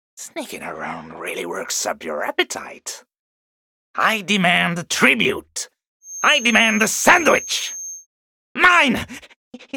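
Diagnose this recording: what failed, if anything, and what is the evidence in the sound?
A feedback whistle appears from 6.0 s to 8.07 s, a thin steady tone at 6.4 kHz sitting about 15 dB below the main sound and swelling and fading slowly in level. The fault is in the acoustic path ahead of the converter, likely a loudspeaker feeding back into the microphone with loop gain just short of runaway. On a spectrogram it is a narrow horizontal line at 6.4 kHz for about two seconds. The waveform barely shows it.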